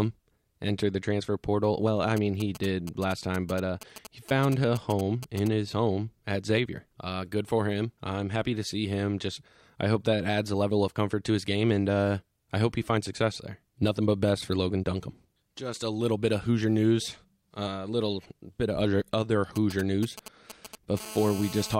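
From 2.17 to 5.48 s, ending just before "his home at", and again from 19.56 to 20.99 s after "bit of other other", GSM signalling bursts from a nearby 2G phone are rectified by the audio circuit. They make a galloping dit-dit-dit of short 217 Hz buzzes well below the speech, seen as clustered vertical stripes on the spectrogram. From 21.00 to 21.75 s, continuous GSM phone buzz follows as the phone enters a call. Its steady 217 Hz rasp sits about 14 dB below the speech and shows as an evenly spaced harmonic comb, with a regular pulse train on the waveform.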